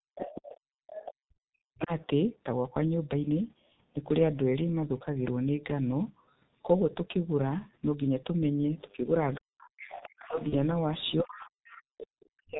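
Throughout the recording the speech carries the sound of the G.723.1 codec, heavily damaged at about 6.3 kbit/s. Everything above 4 kHz is gone, and the slowly updated voice model leaves vowels hoarse and consonants smeared. The call microphone processing only takes out the lowest bass, so the 4 kHz ceiling comes from the codec. The coarse, rough texture, rather than simple dullness, also separates it from a low-pass filter.

From 0.16 to 2.06 s a second voice runs underneath, about 10 dB below the talker. This is the other side's voice leaking through, likely loudspeaker echo the canceller failed to remove. It is a distinct competing voice, so it does not sound like room reverberation, which would only smear the talker's own sound.

Over almost the same span, 0.0 to 1.91 s, the talker is repeatedly pushed down, at worst by around 40 dB, for roughly 1.5 s in total. This is speech suppressed in double talk. 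The echo canceller likely could not separate the near talker from the echo while both were active, so it attenuated everything. The drops follow the overlap with the other voice, which sets them apart from a network dropout.

At 1.29 to 1.34 s the room tone dips by about 27 dB for 50 ms and then returns. This is the background gated by the echo canceller: the microphone was clamped briefly while the loudspeaker played. The dip hits the background rather than speech and recovers cleanly, so it is distinct from the longer double-talk suppression.

From 8.8 to 12.26 s the other side leaks through again, now about 15 dB down, fainter than before. From 8.93 s to the end the talker is again suppressed during the overlap, by up to around 40 dB, for about 2 s in total. Both faults have the same likely echo-control cause as in the opening seconds.

At 10.49 to 10.55 s a short fading smear replaces the speech, and the voice stays weak for a moment afterwards. 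This is VoIP packet loss concealed by the speech codec. The decoder extrapolated from its last pitch and filter, and the gap fits a single lost 30 ms frame. The stretched sound and slow recovery distinguish it from a hard silent cut.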